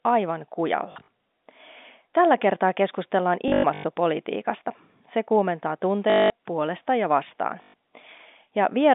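Packets were dropped four times and the receiver covered each gap by replaying the last packet, a packet loss with last packet repeated: 0.92 to 1.08 s, 3.48 to 3.84 s just after "kertaa keskustellaan", 6.1 to 6.3 s just before "puolesta ja vastaan", and 7.62 to 7.74 s just after "puolesta ja vastaan". The repeats fit 20 ms packets, so longer runs buzz at 50 Hz as a robotic stutter over the narrow telephone-band speech.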